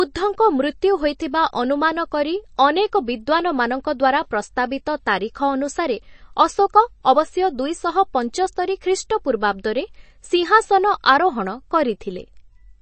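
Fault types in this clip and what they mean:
MP3 compression: plainly audible coding damage and dull speech with nothing above 8.3 kHz, likely from MP3 coding at a low bitrate around 32 kbps.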